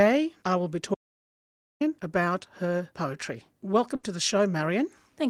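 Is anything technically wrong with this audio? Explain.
Yes, there are two faults. From 0.95 s to 1.81 s there is an audio dropout to silence. The input was most likely lost, through a disconnected device, a failed link or an accidental mute, while the recorder kept writing zeros. The sound cuts off abruptly into complete silence, with no room tone underneath. About 0.86 s of material is simply gone, and the audio then snaps back in mid-flow.

At 3.95 s there is a burst of packet loss, lasting until 4.05 s. About 80 ms of data never arrived in time. The receiver covered the hole by extending the last sound for 80 ms and letting it fade, so you hear a brief held buzz or hiss that dies away. Playback then resumes with about 80 ms of the original skipped, giving a small jump forward.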